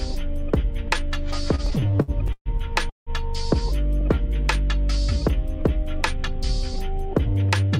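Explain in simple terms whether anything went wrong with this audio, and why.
A few things go wrong here, all in how the audio was delivered.

From 1.55 to 2.48 s you get repeated stalls (stutter): the sound keeps catching and dragging. Packets were arriving late, so the receiver's jitter buffer ran dry eleven times in that stretch, and each time it stretched out the last bit of sound to fill the hole. That filler adds up to about 0.3 s, roughly a third of the stretch, with the longest hold at 130 ms. Nothing is actually lost, it just stumbles.

At 2.89 s there's a call audio freeze lasting 0.2 s. The sound hangs for a moment and then drops to near-silence for about 150 ms before picking up exactly where it left off. The likely cause is a batch of packets held up in transit, so the buffer emptied and the receiver had nothing to play. Because the audio resumes rather than skipping ahead, everything after this point runs about 170 ms later.

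From 6.16 to 7.43 s there's a jitter buffer speed-up. The receiver had built up more backlog than it wanted and clawed it back by snipping out tiny slices, each a pitch cycle or so, over and over. The pitch stays put, but the sound plays at about 105% speed and feels a little rushed. Around 70 ms gets trimmed out in total.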